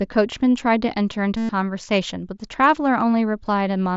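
From 1.37 to 1.49 s, a run of packets between headset and phone was dropped, and concealed Bluetooth headset packet loss filled the roughly 120 ms gap by repeating the best-matching stretch of the most recent waveform, which points to a string of lost frames rather than a single one. Heard through the light graininess of the mSBC wideband link, the speech turns into a buzzy held tone at full level, then warbles briefly as genuine audio resumes.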